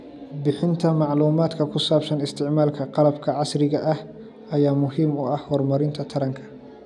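No technical faults are audible.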